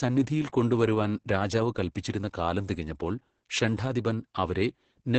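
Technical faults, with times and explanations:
Throughout: Opus voice compression. The speech sounds muffled, hoarse and faintly robotic, with nothing above about 8.6 kHz. The missing top end and grainy texture point to Opus in its SILK voice mode at wideband, at a bitrate around 10 kbps. SILK models the voice with linear prediction and codes the excitation signal very coarsely at such rates, so breathiness and fine detail turn rough, while the band limit strips away crispness.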